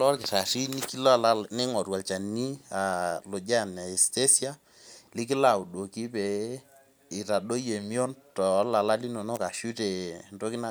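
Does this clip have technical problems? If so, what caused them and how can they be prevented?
No, no technical faults audible.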